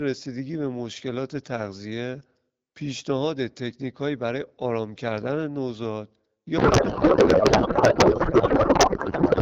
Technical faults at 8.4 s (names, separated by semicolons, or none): codec payload misread